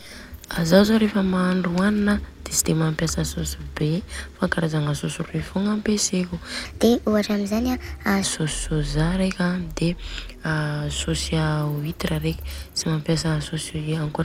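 From 6.65 to 8.23 s, a section plays at the wrong speed: 1.27 times fast, likely a clock mismatch. Speech jumps about four semitones higher.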